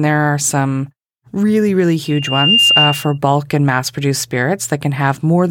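From 2.04 to 3.18 s, the microphone picks up its own loudspeaker, causing loudspeaker feedback squeal: a 2.8 kHz tone swells over about half a second to a few decibels above the speech.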